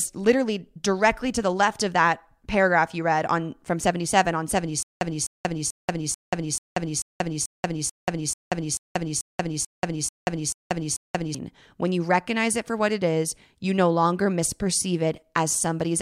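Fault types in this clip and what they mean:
Stutter with silent gaps: from 4.83 to 11.35 s the speech locks into one 254 ms fragment that repeats 15 times, each followed by 185 ms of dead silence, a steady 438 ms cycle. It is likely a stalled stream replaying its last buffer while starved of new audio.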